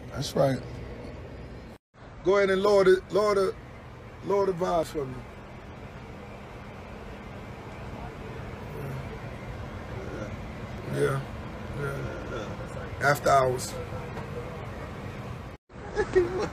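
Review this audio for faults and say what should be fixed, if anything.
Two abrupt skips, at 4.83 s and 10.78 s, each drop about 50 ms. These are likely audio missing between chunks. On a waveform the sound jumps without a gap, and on a spectrogram there is a sharp vertical seam. To prevent it, use overlapping or double-buffered chunk handoff so recording continues while each 6 s chunk closes.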